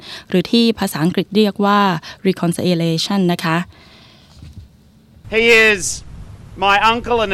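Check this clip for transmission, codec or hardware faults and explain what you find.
No transmission, codec or hardware faults turn up anywhere in the clip. There is nothing to report for any part of it.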